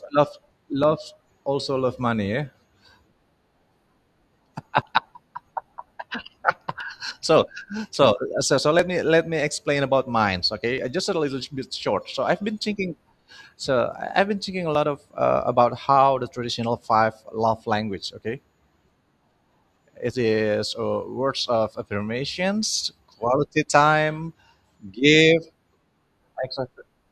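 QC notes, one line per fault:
0.83, 6.80, 8.79, 14.75 s, overlap between stream segments: four tiny skips, just before "also love money", at 6.80, between "so so so" and "me let me explain", and between "I've been thinking a" and "of uh about". Roughly 6 to 11 ms goes missing each time because two segments claimed the same moment and the player trimmed real audio, so the waveform jumps. The spacing lands on multiples of about 2 s, which fits 2-second segments.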